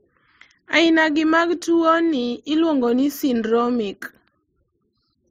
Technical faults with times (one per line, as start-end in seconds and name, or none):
0.00-5.31 transcoding between lossy codecs